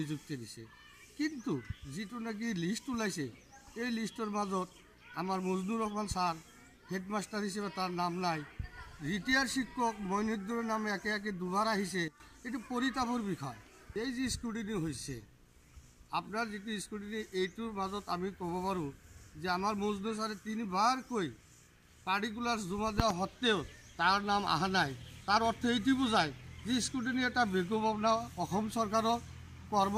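At 12.08 s the audio has a sudden gain jump: level falls by about 12 dB from one sample to the next, background noise dropping with it, settled by 12.2 s. Unlike compressor pumping or a fade, there is no ramp, likely from an unramped gain change.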